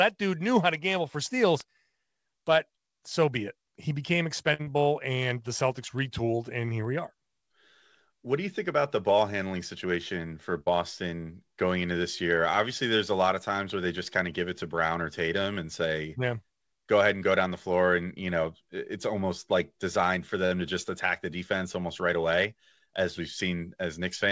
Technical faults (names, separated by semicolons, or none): short stall from a late packet; short concealed packet loss; jitter buffer speed-up